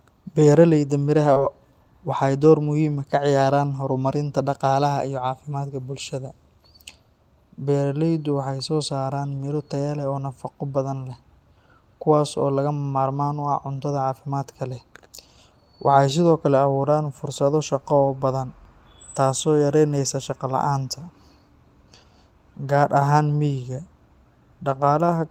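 At 1.33 s, lasting to about 1.38 s, there is a short concealed packet loss: roughly 20 ms of the speech never arrived in time, and the decoder covered the gap with about 23 ms of synthesized continuation before crossfading back into the real signal. It is heard as a brief smear or wobble rather than silence or a sharp click. That smoothed, blurred patch is what separates it from a hard dropout or a digital glitch.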